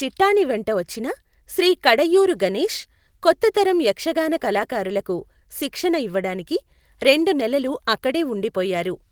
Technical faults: lost packet rebuilt from error correction

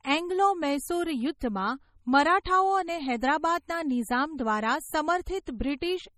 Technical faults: MP3 compression

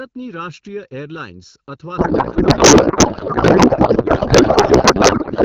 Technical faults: channel delay (comb filtering); codec payload misread

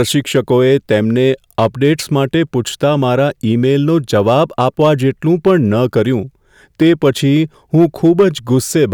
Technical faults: hard clipping

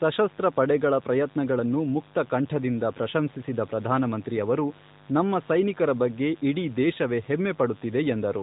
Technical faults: mains buzz

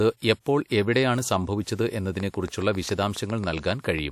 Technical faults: train of clicks

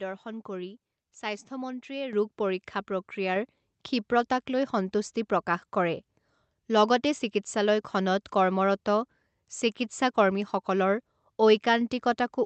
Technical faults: microphone volume stepped up

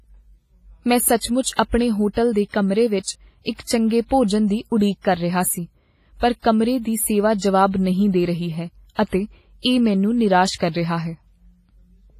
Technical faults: WMA compression

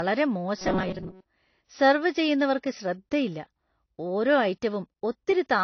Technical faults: low-bitrate audio saved at a high bitrate; robotic sound from repeated short buffers

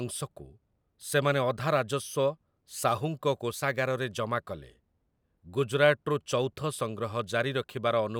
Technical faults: none

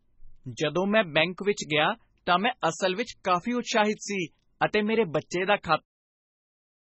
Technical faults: MP3 compression

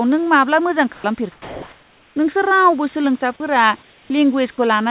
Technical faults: sound dropped by the voice detector; comfort noise in place of the background

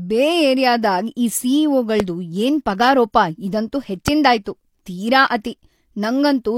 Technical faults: loud pop; pre-echo

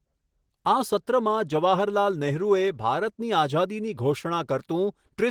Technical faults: none

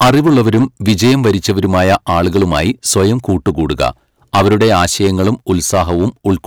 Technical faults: hard clipping

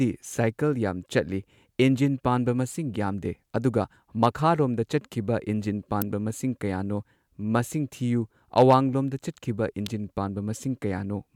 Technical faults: electrical switching spike

